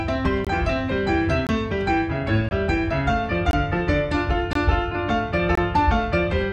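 Gap between chunks at 0.45, 1.47, 2.49, 3.51, 4.53 and 5.55 s: 1.0 s chunks are separated by 21 ms of hard-edged silence, interrupting the sound at each join.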